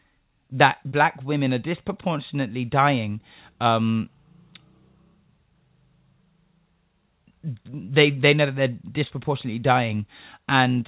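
Twice in this speech, about 30 ms of audio failed to reach the decoder in time, producing short concealed packet loss. The receiver bridged each gap by extending the preceding sound and then crossfading back into the real signal. At 0.89 to 0.94 s, just before "women are disproportionately dying", and at 9.07 to 9.13 s, right after "they know that they're", this comes across as a brief smeared wobble. The narrowband call path, with nothing above 4 kHz, dulls the surrounding audio.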